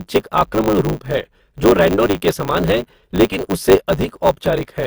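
HE-AAC compression, throughout the speech: treble above the low band is rebuilt by copying lower bands upward, so s sounds come out gritty and lispy. The plainly audible damage likely comes from a low bitrate, around 24 kbps.

Block size mismatch (truncated), throughout: each block loses its tail because one stage writes longer blocks than the next reads, which fits 512-sample writes. The discarded ends leave a 100 Hz buzz, and the speech runs 1.16 times fast with its timbre intact.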